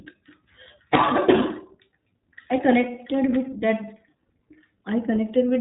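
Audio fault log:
throughout, iLBC codec: plainly rough, slightly synthetic speech from frames coded independently, fitting 20 ms frames at 15.2 kbps; the spectrogram is blank above 3.8 kHz.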